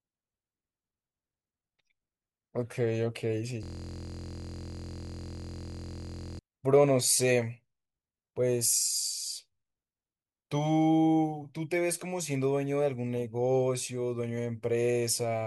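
From 3.63 to 6.39 s, a system hang loop repeats one 23 ms slice. It buzzes at 43.1 Hz, fitting a stuck 1024-sample buffer.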